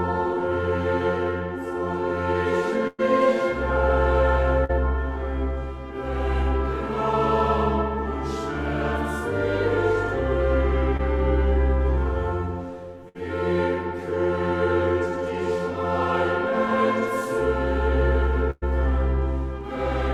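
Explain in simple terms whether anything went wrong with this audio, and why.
Three places have a burst of packet loss: 2.87 to 3.01 s, 13.09 to 13.17 s, and 18.51 to 18.64 s. At the first and last, about 100 ms of audio never arrived in time. At the middle one, 60 ms went missing. The receiver covered each hole by stretching the last sound it had and turning it down. You hear a held buzz or fading hiss, with a brief silence of 10 ms and 20 ms at the first and last. The sound then picks up further along, with that stretch gone.

Two smaller dropouts are short concealed packet loss: 4.64 to 4.71 s, where about 40 ms was missing, and 10.97 to 11.01 s, where about 20 ms was missing. Here the receiver continued the preceding sound for a few hundredths of a second and blended smoothly back into the real audio. Each comes across as a quick smear or wobble, short enough that a brief sound at that spot could disappear.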